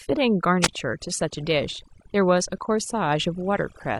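Overdone noise removal runs through the whole speech clip. The denoiser was set too hard. It pulls individual frequency bands down whenever they sit near its noise estimate. The background collapses into near silence with twinkling specks. Quieter parts of the voice vanish too.

From 0.61 to 0.68 s there is a wireless microphone squelch dropout. The radio link faded, and hiss rises briefly. The receiver's squelch then mutes the output for about 16 ms. A short hole of near silence follows before the voice returns.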